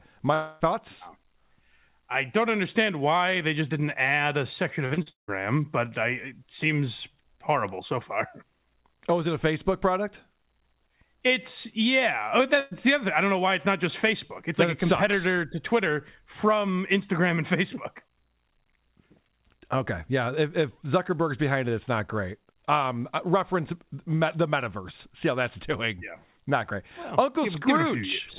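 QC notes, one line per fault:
0.34 to 0.62 s, long network dropout: for about 0.26 s the sound is replaced by a continuation of what came before, a buzz or hiss that fades out, and the stream picks up further on with roughly a quarter second gone. The likely cause is a stall in arriving audio. A single long hole is what sets it apart from repeated loss.
4.86 to 5.30 s, repeated packet loss (robotic sound): between "didn't add a section" and "but I it seems", four separate holes follow close together, the longest 178 ms. Each is patched by extending the last sound, so about two thirds of this stretch is filler, and it comes across as choppy rather than as one clean gap.
12.60 to 12.73 s, burst of packet loss: a single gap of about 120 ms just before "the other I don't". The last sound is stretched into a short buzz or hiss that dies away, and then the audio resumes with that slice missing. 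It is one brief event, shorter than the dropout at 0.34 s and without the stuttering of the 4.86 s stretch. The band stops at 4 kHz throughout, which fits a narrowband call codec at 64 kbps.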